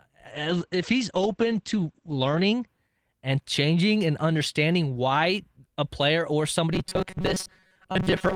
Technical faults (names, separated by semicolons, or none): call bitrate drop; robotic sound from repeated short buffers